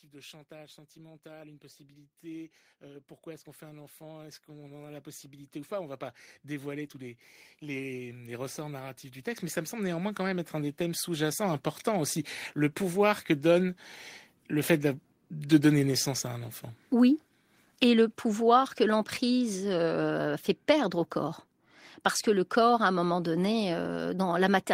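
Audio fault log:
0.05–12.21 s, automatic gain rising: the gain control judged the input too quiet and kept raising its gain, so the speech and the background noise behind it swell together by about 24 dB across roughly twelve seconds. The rise ends just before "le pouvoir que donne". On a waveform the envelope widens steadily like a ramp. On a spectrogram the whole frame, noise floor included, brightens evenly at all frequencies, not just the speech.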